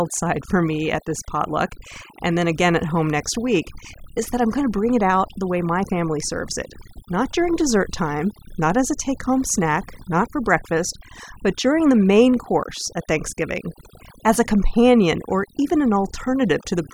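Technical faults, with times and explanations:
Throughout, overdone noise removal: an aggressive denoiser cut frequency bands near its noise estimate, taking quiet speech detail too, leaving twinkling silence.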